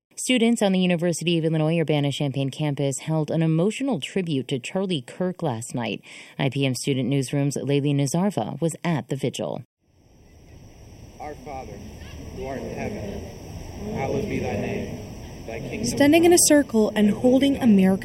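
The channel delay (comb filtering) runs from start to finish. One channel arrives a fraction of a millisecond after the other, roughly 0.4 ms. When the two are combined to mono, content common to both cancels at regular intervals. The first notch falls around 1.5 kHz, with further notches evenly spaced above it. The result is a hollow, phasey tone. The notches stay fixed and never sweep.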